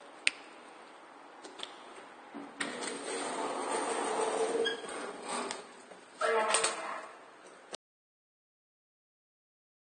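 From the first moment, these everyday sounds are dull and smeared: there is nothing above 9.1 kHz. That points to low-bitrate audio saved at a high bitrate. The material was likely squeezed through a low-rate codec, on the order of 32 kbit/s AAC, and then re-encoded as high-bitrate MP3, which keeps those losses intact. A spectrogram shows a flat, hard ceiling at 9.1 kHz across the whole clip, with blotchy, smeared detail below it.

At 7.75 s the audio drops out to silence and never comes back. The cut is abrupt and mid-flow, with no fade and no room tone behind it, only silence through to the end. The input was likely lost, through a disconnection or a mute, while recording carried on writing silence. On the waveform the trace collapses to a flat line from 7.75 s onward. The spectrogram goes empty over the same stretch.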